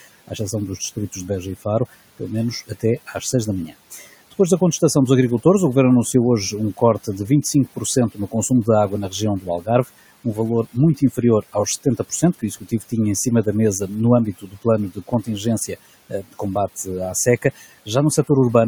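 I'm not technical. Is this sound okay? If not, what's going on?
No. The noise suppressor, the part meant to remove background hiss, twice mistook bits of the speech for noise and turned them down along with it. This is speech cut by the noise suppressor. From the start to 4.8 s, just before "dos agricultores o", about half a second of speech sounds swallowed or faint. From 6.8 s, after "anunciou hoje um", to 18.3 s, about two seconds in total is softened the same way. The room noise underneath belongs to the recording itself.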